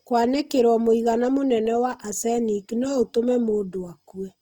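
From start to finish, the speech carries plainly audible coding damage: the voice turns grainy, rough and noisy rather than swirly or hollow. This is likely Opus compression in its music (CELT) mode at a low rate, one that fits about 24 kbps. Short of bits, the encoder keeps each band's energy but fills its detail with folded or noise-like content. A spectrogram shows content reaching up to 20.4 kHz without gaps, but the upper bands look speckled and smeared.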